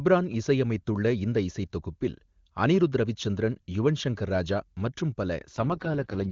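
This is a speech clip carried over an AMR wideband (HD Voice) link, clear up to 5.47 s. At 5.47 s an AMR rate drop sets in and lasts to the end of the clip. The bandwidth does not narrow and nothing goes silent. The voice simply turns rough, raspy and synthetic. That texture fits the codec being pushed from 23.85 down to 6.6 kbit/s, which spends far fewer bits on the speech itself, probably because of a weakening radio link.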